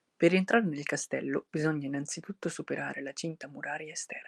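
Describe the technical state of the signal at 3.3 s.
At 3.3 s the speech is inside a call bitrate drop that runs from 1.32 s to 3.53 s. The bandwidth estimate fell, so the encoder coded with far fewer bits, which fits a fall from about 64 kbps to about 28 kbps, held at its lowest for roughly 1.4 s. The sound turns coarse and watery. Unlike packet loss, the signal stays continuous, with no gaps or repeated fragments.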